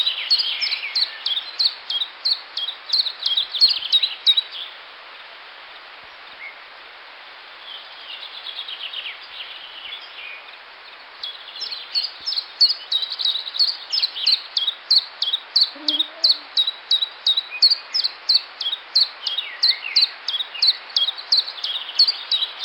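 No technical faults are audible.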